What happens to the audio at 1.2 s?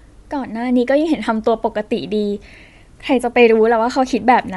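Right around 1.16 s there's a brief dropout from lost LE Audio frames. The gap is tiny and fits a single 7.5 ms frame going missing. The LC3 decoder covers it by replaying the previous frame's spectrum with scrambled signs, so instead of a hard hole you get a quick, noisy smear in the speech. It's too short to fade toward silence.

Underneath that, and across the whole clip, there's a breathy, grainy edge on the speech, with a thin, noise-filled top end. That's likely Bluetooth LC3 compression at a modest rate of about 48 kbps with 7.5 ms frames. The codec drops much of the upper spectrum and fills it back in with noise, which gives the speech that fizzy, synthetic sheen. The damage is plainly audible here.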